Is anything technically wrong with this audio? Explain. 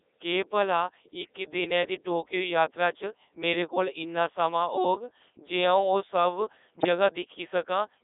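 Yes. Two faults are audible.

Throughout the clip, the speech has passed through the Codec 2 vocoder. The heavy damage fits its 3.2 kbit/s mode. The codec does not keep the waveform. It sends only pitch, voicing, energy and a spectral envelope. The decoder then rebuilds the voice from sine waves. The result is robotic and buzzy. The band is narrowed to about 300 Hz to 3.7 kHz, so the sound is thin.

From 6.78 to 6.86 s there are bit errors on digital voice radio. The burst lasts about 80 ms, which fits roughly three vocoder frames. Corrupted bits there point to a high error rate, around several percent. Each bit steers the pitch, level, voicing or spectrum of a whole frame. So the synthetic voice lurches in pitch, loudness and tone colour. It breaks briefly into warbling, bleepy gibberish.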